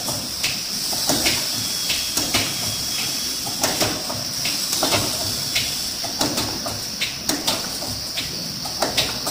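From start to finish there's imaging from sample-and-hold upsampling. The rate was raised by simply repeating samples, with no smoothing filter, so mirrored copies of the spectrum sit between 12 and 24 kHz, about 10 dB under the sound. That fits a 24 kHz source, and you hear it as a metallic fizz that tracks the sound's level.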